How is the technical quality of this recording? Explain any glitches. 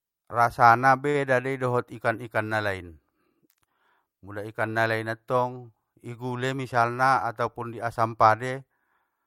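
Two network-timing glitches interrupt the speech.

At 1.09 to 1.16 s, just before "dei dot ikan ikan", there is a short stall from a late packet. A packet missed its playout time, the jitter buffer ran dry, and the receiver extended the last sound by 48 ms until the data arrived, then resumed where it left off. Nothing is lost, but that sound is held too long, with a faint buzzy or dipping texture, and playback runs 48 ms later from then on.

From 6.44 to 6.73 s, between "ikan nalain attong i" and "atopun i asam", a jitter buffer speed-up occurs. The buffer was holding more audio than its target, so the receiver trimmed it by repeatedly cutting out short pitch-period-sized slices, around 50 ms in total. Over that stretch the speech plays at about 113% of normal rate with its pitch unchanged, so the delivery sounds briefly rushed.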